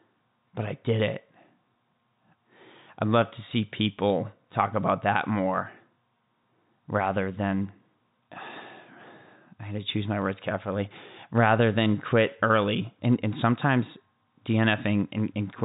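No faults are audible anywhere in this speech recording.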